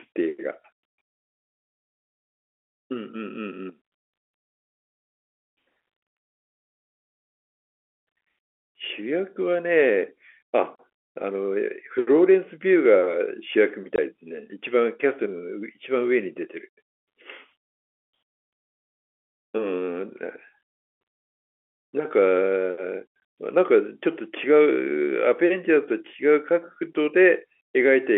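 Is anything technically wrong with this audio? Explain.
Yes, two short gaps from packet loss filled with silence interrupt the speech, at 13.96 to 13.98 s and at 23.20 s. Each hole lasts about 20 ms, which fits a single lost 20 ms packet. The receiver had nothing to play and inserted digital silence, so the sound stops dead and restarts with an abrupt edge. Concealment would instead smear or repeat the preceding sound across the gap, and a noise gate would fade rather than cut. The narrow 300 to 3400 Hz telephone band from the G.711 coding is audible throughout.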